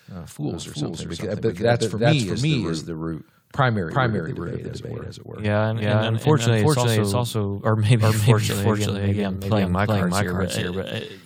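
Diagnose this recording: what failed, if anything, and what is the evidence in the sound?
A doubled audio track runs throughout. The speech is repeated by a full-band copy at roughly equal level, trailing by around 400 ms, dry and without decay. The likely cause is a routing or driver fault that captures the signal twice, once through a slower buffered path.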